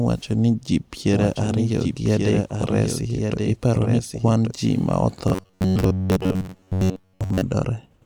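From 1.13 s, right after "ni ji", a doubled audio track appears and runs until 4.51 s, ending just before "ji ma". A second full-band copy of the speech trails the original by roughly a second, about 5 dB quieter, with no reverberant tail or room colouring. The likely cause is a second, slower capture path or two out-of-step copies in an edit. A spectrogram shows the same pattern repeated about a second later, with hard vertical edges where the copy starts and stops.

After "ji ma", from 5.28 s to 7.42 s, the speech turns into robotic sound from repeated short buffers. It becomes a stiff metallic buzz at 93.8 Hz that still loosely tracks the syllables, because a segment about 10.7 ms long is replayed over and over. Most of the real audio in that span is skipped, likely because new data arrives too seldom. The waveform shows identical cycles every 10.7 ms, and the spectrogram shows a rigid comb of harmonics spaced at 93.8 Hz.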